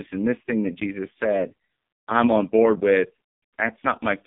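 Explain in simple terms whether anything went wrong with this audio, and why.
AMR narrowband mobile codec, throughout the clip: the speech passed through an old mobile-phone codec that rebuilds the voice from a simple model of the throat and mouth. Nothing above 3.5 kHz survives, and at this very low quality the voice sounds heavily buzzy and synthetic.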